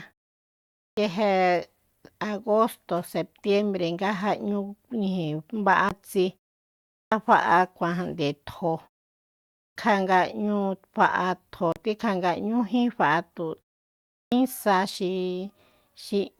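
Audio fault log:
0.77 s, 6.95 s, 9.57 s, 14.11 s: clipped start after a pause. After silences of 0.57 to 0.76 s, the output device went to sleep and had to wake before playing again. The opening 0.17 to 0.21 s of speech is lost, so each phrase begins abruptly without its first sounds.
5.89 s, 11.72–11.76 s: Bluetooth stall. Interference likely delayed packets until the headphone buffer ran dry. Playback dropped to silence for 17 ms and then 36 ms before continuing, which is heard as brief holes in the speech.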